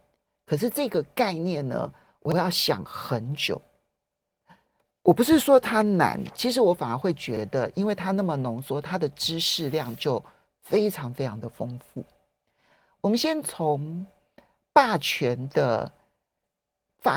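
A brief click or stutter at 2.32 s and again at 7.37 s replays 50 ms of the speech. These are overlapping chunks: the audio was handled in 5 s blocks, each starting 50 ms before the previous one ended, doubling sound at every join.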